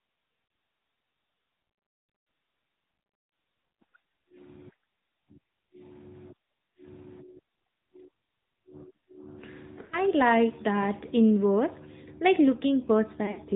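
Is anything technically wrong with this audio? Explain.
Yes, two things. The whole clip is speech that went through the AMR narrowband mobile codec, and there are three short patches of lost AMR speech frames.

The codec damage runs the full length and is plainly audible. AMR-NB samples at 8 kHz, so nothing above 4 kHz survives, and the voice is rebuilt from a vocal-tract model driven by a handful of pulses. That gives the speech a buzzy, synthetic edge. The amount of artefacting fits a mid-rate mode around 10 kbps.

The lost frames show up at 0.46 to 0.50 s (about 40 ms), 9.82 to 9.98 s (about 100 ms), and 13.26 to 13.40 s, where 60 ms of gaps are scattered over 100 ms and the longest run is 40 ms. When a frame fails its checksum, the decoder reuses the last good pitch and vocal-tract settings with falling gain. The short ones come across as a quick dip or warble. The 100 ms run at 9.82 s stretches the sound and lets it sag toward silence before the voice comes back a bit weak.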